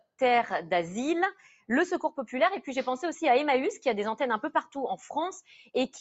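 A noise suppressor built for speech stays engaged from start to finish and treats steady parts and tails of the sound as noise, pulling them down by around 5 dB while attacks pass. Held material sinks and recovers, so the audio pumps and thins, over a call microphone path that carries nothing above 8 kHz.

From 1.35 to 1.69 s, the noise suppressor cuts this sound harder, with the deepest drop about 13 dB and roughly a fifth of a second affected in total. The sustained portion sags and its decay is clipped short.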